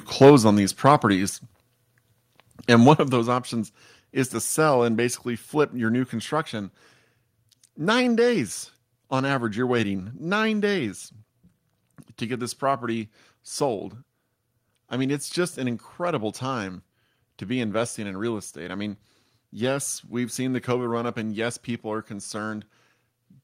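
From 0.21 to 0.35 s, and again from 0.86 to 0.91 s, the loudest speech peaks show microphone overload: a harsh, crackly edge, likely from input gain set high enough to drive peaks about 4 dB, then about 1 dB, past the converter's ceiling, flattening roughly a tenth of samples in the first burst. At 0.3, 1.29 and 3.12 s, speech and background drop abruptly together by about 3, 4 and 4 dB. This is the microphone volume stepped down, likely by call software reacting to the clipping and cutting input gain in discrete jumps.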